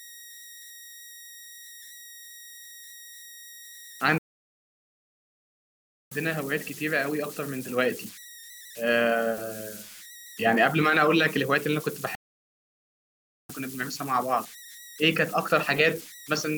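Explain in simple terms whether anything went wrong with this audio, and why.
Two things went wrong. The first is converter idle tones: the converter turning the sound into digital form had no added randomising noise, so on quiet passages it fell into repeating patterns. Throughout the speech, that leaves a whistle around 2 kHz and a grainy hiss.

The second is a playback stall, heard twice. The player was likely starved of data or held up, so the speech simply stops dead, from 4.18 to 6.12 seconds (about 1.9 seconds) and from 12.15 to 13.50 seconds (about 1.3 seconds), before carrying on.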